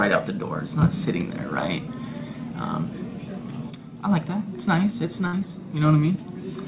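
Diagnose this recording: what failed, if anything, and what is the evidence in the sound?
A burst of packet loss at the network stage hits at 5.27 s. Packets arrived too late or not at all, so the receiver stretched the preceding sound and faded it for 58 ms, to 5.34 s. Audio resumes 60 ms further on, with that stretch missing.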